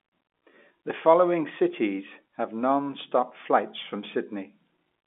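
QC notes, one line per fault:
No faults heard.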